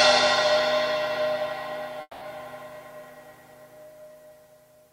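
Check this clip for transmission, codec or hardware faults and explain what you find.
One transmission fault is present.

From 2.01 to 2.23 s there is a call audio freeze: the last sound carries on as a fading buzz, ending in about 40 ms of silence, filling about 200 ms in all. This is likely a jitter buffer running dry while packets were delayed. Playback then resumes where it stopped, nothing lost but 200 ms later.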